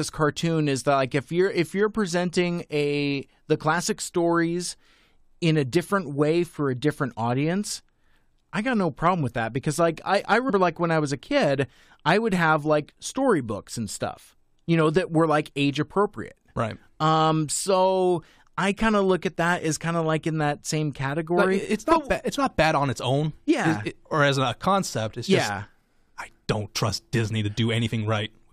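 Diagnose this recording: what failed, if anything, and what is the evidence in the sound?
The codec stage failed. Several compressed frames were never decoded, either missing from the file or rejected by the decoder as damaged, so playback jumped ahead by roughly 150 ms of speech. Between "because like I I" and "like when I was", at 10.48 to 10.50 s, the flow lurches forward. The jump size fits frames of about 23 ms.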